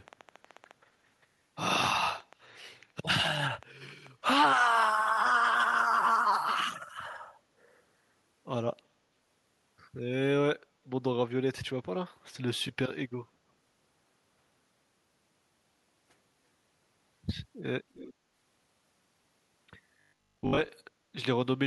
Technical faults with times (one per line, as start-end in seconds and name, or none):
0.08-4.08 train of clicks
17.94-18.14 echo leak
19.97-20.69 robotic sound from repeated short buffers